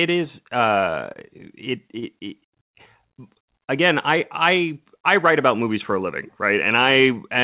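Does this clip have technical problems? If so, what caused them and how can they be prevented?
Yes. The clip has short concealed packet loss at 1.13 to 1.18 s and again at 1.99 to 2.05 s. In each case about 30 ms of the call's speech arrived too late or not at all. The receiver covered the gap by extending the preceding sound, pitched where the speech was voiced and noise-like where it was not, then faded back into the real signal. This leaves a brief smeared, wobbling patch in the narrowband, telephone-limited audio, which carries nothing above 4 kHz. Prevention: improve network stability or enable forward error correction and a deeper jitter buffer so lost packets are recovered before playout.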